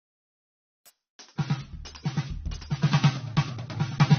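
A music clip where the stream falls back to a lower bitrate at 0.90 s and stays there to the end. The switch is instant with no gap: the top end suddenly disappears, with nothing left above about 6.3 kHz. That's an adaptive stream at a lower bitrate, and the sound fits the player dropping from roughly 96 kbit/s to 24 kbit/s AAC when the connection slowed.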